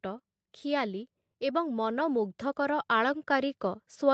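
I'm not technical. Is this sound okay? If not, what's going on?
No. The automatic gain rising fault runs from 0.05 s to the end at about 4.14 s. The call's automatic volume control decided the incoming sound was too quiet and kept turning itself up, a little at a time, for the whole clip. You hear this as a slow, steady swell. The speech and the background hiss or room sound both grow louder together instead of staying at one even level.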